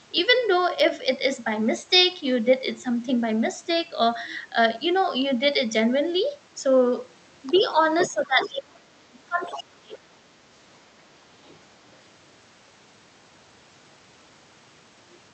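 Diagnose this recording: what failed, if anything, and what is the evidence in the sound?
Call processing stage, other side's voice leaking through: a second voice appears at 7.47–7.66, 7.99–8.11, 8.42–8.49, 9.45–9.62 and 11.46–11.57 s, about 10 to 30 dB below the talker. This is likely residual loudspeaker echo that the canceller failed to remove. It comes in short scraps that track the far end, not as the steady background of wiring crosstalk.

Call processing stage, speech suppressed in double talk: the talker dips about 5 dB around 7.52–7.66 s. From 8.03 to 10.36 s it is then pushed down in pieces by up to about 30 dB, for roughly two seconds, while the other voice leaks in. The likely cause is the canceller turning down both sides at once.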